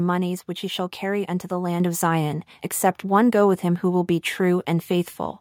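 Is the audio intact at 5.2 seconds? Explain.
Yes, the speech at 5.2 seconds plays through intact, with no dropout, click, distortion or other fault at that moment.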